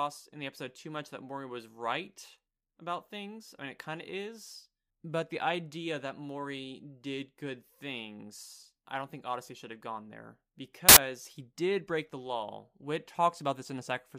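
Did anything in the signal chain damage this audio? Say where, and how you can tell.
Yes. From 10.89 to 10.97 s the speech gives way to a burst of loud, harsh broadband noise lasting about 80 ms. This is samples built from the wrong bytes at the sample-format conversion stage: each sample's bytes were misaligned or swapped, so the fast-changing low bits became the dominant part of every value.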